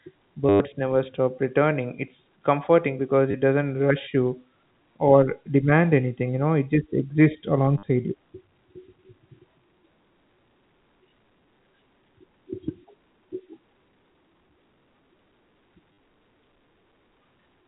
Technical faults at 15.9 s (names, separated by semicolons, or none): packet loss with last packet repeated